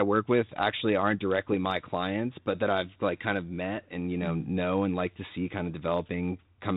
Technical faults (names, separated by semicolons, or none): none